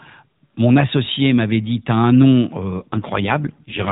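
An AMR rate drop sets in at 2.75 s, right after "un nom", in this speech clip carried over narrowband AMR mobile coding. From there to the end, the voice turns coarser and more buzzy and synthetic, pointing to the link falling from the 12.2 kbps mode to roughly 5.9 kbps, with the freed bits going to error protection. The band stays capped at 4 kHz throughout, and there is no gap, only the rougher rendering.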